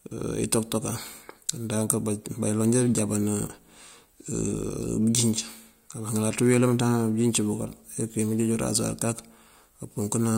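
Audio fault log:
No faults heard anywhere in this speech recording.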